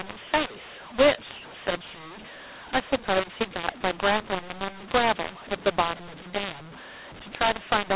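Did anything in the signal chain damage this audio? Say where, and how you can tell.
Yes. The damage sits at the codec stage, where the telephone speech was decoded. This is a mu-law and A-law mix-up. The audio was encoded with A-law but read back as mu-law, for the whole clip. The two logarithmic scales map the 8-bit codes to different levels. So loud and soft parts come out at the wrong sizes, and the speech sounds harsh and distorted. The quietest samples are pushed well above silence, so the pauses fill with noise. The underlying 8,000-sample A-law telephone coding itself is intact.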